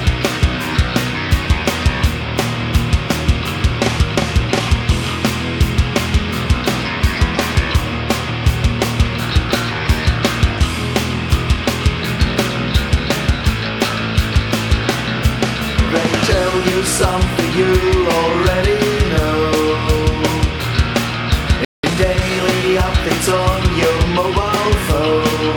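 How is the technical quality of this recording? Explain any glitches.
Two connected glitches occur near the end: a brief dropout followed by a hurried passage.

From 21.65 to 21.83 s there is a playback stall: the sound stops dead for about 0.19 s, most likely because the player ran short of data or its thread was blocked. On a waveform this is a flat line; a spectrogram shows a clean vertical gap across all frequencies.

From 21.83 to 23.07 s comes time-compressed catch-up: the player trims its backlog by dropping small slices and cross-fading the joins, so the audio runs about 1.15 times fast at unchanged pitch. Spectrogram harmonics stay level while events bunch closer together.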